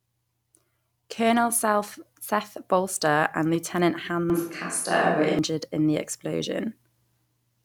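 From 4.30 to 5.39 s the close microphone's signal likely dropped out and a distant microphone took over, so the speech turns suddenly roomy and hollow with thinner bass, at roughly the same level, with background noise about 35 dB below it, before snapping back just ahead of "in the".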